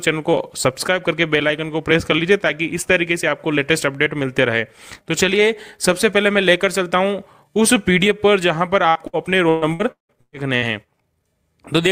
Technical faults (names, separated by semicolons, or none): repeated packet loss (robotic sound)